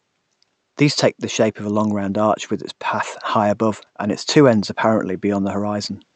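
No technical faults are audible.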